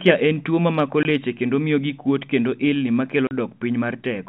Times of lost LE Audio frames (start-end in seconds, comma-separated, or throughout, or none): none